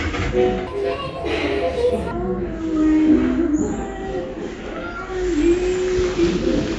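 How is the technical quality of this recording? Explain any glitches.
There's one clear glitch, a wrong sample rate, from 0.67 to 2.11 s. Through that stretch the audio is played back faster than it was captured, with no resampling, so the whole thing runs about 1.38 times too fast and jumps up roughly 5.5 semitones in pitch. That ratio fits 16 kHz material being clocked out at 22 kHz. You hear the sound turn higher and hurried, and then it snaps back to its normal speed and pitch once the section ends.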